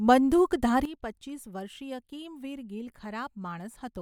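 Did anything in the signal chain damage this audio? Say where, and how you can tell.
Yes. A sudden gain jump at 0.85 s drops the speech by about 12 dB, and the level stays down through the end of the clip. The background noise falls by the same amount at the same instant, which shows the change was applied to the whole digital signal rather than coming from the talker. The step is likely a gain setting or bit shift applied in the driver or processing stage without a ramp, switching level between consecutive samples.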